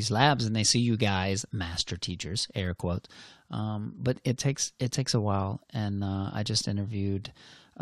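Nothing technically wrong can be heard anywhere in this speech recording.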